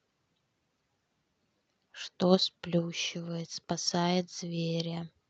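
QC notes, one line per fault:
No faults found; the speech comes through an Opus-type call path whose top end stops at about 8 kHz.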